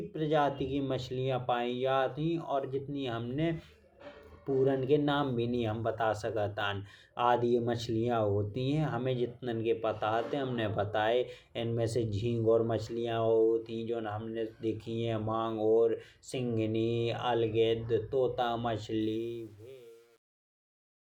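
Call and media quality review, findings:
Truncation distortion on the fade-out, 19.01 to 21.08 s. The fade begins around 19 s. From 19.28 s it turns gritty. Fade or gain stage likely rounds to about 9 bits with no dither.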